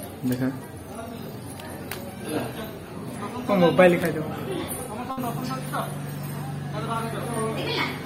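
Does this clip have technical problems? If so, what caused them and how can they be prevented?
Yes. At 5.11 to 5.20 s the sound briefly freezes into a held, fading tail for about 60 ms, then jumps ahead with a slice missing. This is a burst of packet loss: consecutive packets never arrived in time, and the receiver stretched and faded the last audio. A larger jitter buffer, forward error correction or a steadier network link would prevent it.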